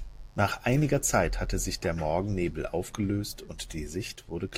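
From start to finish, a mains buzz sits under the speech: a steady, raspy hum locked to the 50 Hz supply, roughly 30 dB below the speech. Sharp switching spikes entering the signal path twice per mains cycle produce a comb of 50 Hz harmonics. On a spectrogram these appear as evenly spaced horizontal lines stacked up into the kilohertz range. In the waveform's pauses, a regular train of spikes repeats 100 times per second.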